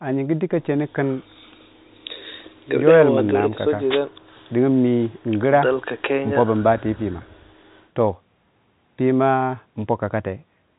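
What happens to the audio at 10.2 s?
Nothing goes wrong at 10.2 s; the speech carries on intact through that moment, with the narrow, telephone-like band of the call path, which leaves nothing above 4 kHz.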